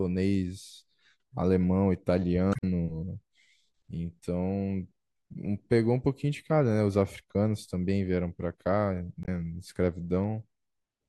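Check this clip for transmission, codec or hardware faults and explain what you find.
Two faults of one kind are present, both damaged data in a compressed stream, at 2.51 to 2.64 s and at 9.23 to 9.28 s. In each, corrupted bytes make the decoder misparse frames, lose sync and hunt for the next valid frame header. The result is a brief glitch cutting across the speech. The first, longer event also adds about 16 ms to the running time, so the speech after it lands slightly late.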